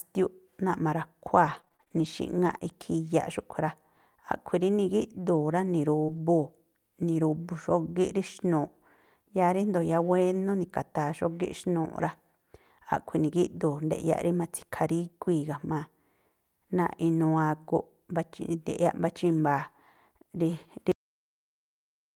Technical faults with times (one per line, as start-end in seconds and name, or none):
1.45-2.63 repeated packet loss (robotic sound)
6.05-6.10 short concealed packet loss
6.08-6.18 lost packet rebuilt from error correction
19.58 lost packet rebuilt from error correction
20.92-22.15 cut-off end